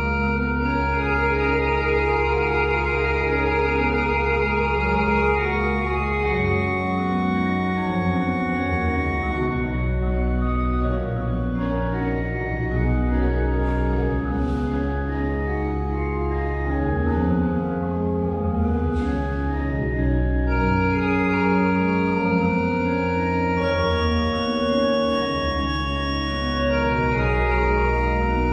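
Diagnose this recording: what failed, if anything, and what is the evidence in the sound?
Nothing failed; no fault is audible anywhere here.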